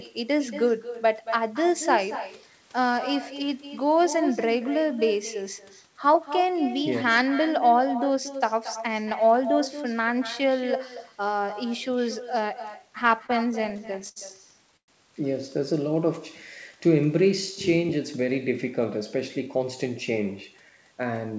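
Speech carried over a call link, band-limited to nothing above 8 kHz in a way that fits a G.722 wideband codec at 64 kbps. Throughout, there is echo with no canceller: a quieter, thinner copy of the speech trails it by roughly a fifth of a second at about 11 dB below the direct sound. This points to the far end's loudspeaker feeding its microphone with nothing subtracting the return. From 13.20 to 14.18 s, repeated stalls (stutter) break the flow into eleven short hold-ups. The longest lasts 74 ms, and together they add 176 ms of stretched, continued sound, about 18% of that span. The jitter buffer kept running dry as packets arrived late, so the speech drags and stutters without losing content. At 14.77 to 14.90 s comes a call audio freeze: 113 ms is filled, 100 ms of it silent, before the speech resumes where it stopped. The likely cause is packets held up in transit that emptied the buffer and pushed playback about 113 ms later. 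From 18.69 to 19.85 s, a jitter buffer speed-up runs the speech at 106% with unchanged pitch, trimming around 70 ms of accumulated delay by cutting out short pitch-period slices, so that stretch sounds slightly hurried.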